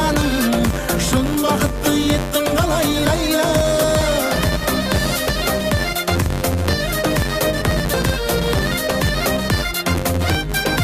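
A filter restarted on every block runs from the start of the clip to its end. The filter discards its internal state at each block boundary and begins again from silence, so each block opens with a small transient. These repeat at 93.8 Hz, which fits a 512-sample block, and form a steady buzz under the sound that grows louder and quieter with the signal level.

Over the clip the audio also skips forward four times, at 3.84, 5.29, 7.94 and 9.98 s. The likely cause is a dropped buffer (overrun): the software did not collect its input in time, so the hardware overwrote it and the audio on either side was joined with nothing in between. Each skip is heard as an abrupt jump. At 3.84 and 7.94 s roughly a tenth of a second is missing, and at 5.29 and 9.98 s a bit more.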